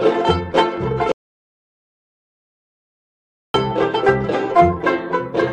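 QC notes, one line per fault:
1.12–3.54 s, audio dropout to silence: the music cuts out abruptly into 2.42 s of dead silence, likely a lost input while recording continued writing silence.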